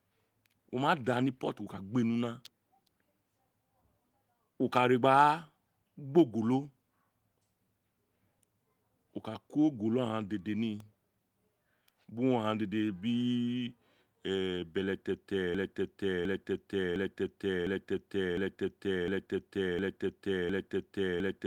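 Electrical switching spikes at 2.45 s and 10.80 s in this speech recording are sharp snaps sitting on top of the sound, each over almost instantly, likely from a nearby switch, motor or static discharge arcing briefly into the audio line. A broken-record loop starts at 15.55 s and runs to the end: one 0.71 s fragment repeats back to back eight times, likely because the player, encoder or stream stalled and kept resending the last piece it held, so whatever should have followed is gone. Beneath both faults sits the light coding of full-band Opus voice compression at 24 kbps.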